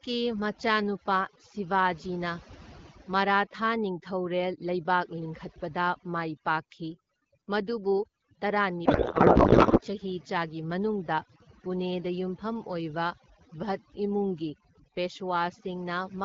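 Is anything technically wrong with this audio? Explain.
Yes, there are two faults. Throughout the clip there is overdone noise removal: a noise reducer was set far too aggressively, so any frequency band close to its noise estimate gets pushed down or cut, taking quiet parts of the speech with it. The background drops and breaks up into twinkling specks.

From 8.85 to 9.80 s there is a codec payload misread. The receiving side unpacked the codec's bits in the wrong layout, which fits octet-aligned AMR frames being read as bandwidth-efficient, so every field landed in the wrong place. For that stretch the speech is replaced by garbled noise and warble that barely tracks it, before the AMR-WB HD Voice stream at about 12.65 kbit/s resumes decoding cleanly.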